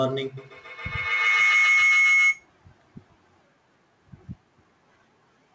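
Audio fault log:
0.37–2.51 s, feedback howl: A tone near 2 kHz swells and peaks about 6 dB above the speech. The loop repeats roughly every 150 ms. A microphone hears a loudspeaker in the same room, and the loop gains level on each pass.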